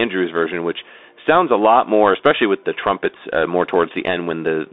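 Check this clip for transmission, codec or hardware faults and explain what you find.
The speech carries one fault for its whole length, a Bluetooth CVSD headset codec. Everything sits between 250 Hz and 3.7 kHz, and the one-bit up-down coding, which fits a 64 kbps stream, lags on fast loud changes, so s sounds turn scratchy over a granular hiss. That plainly audible grit separates it from clean telephone band-limiting.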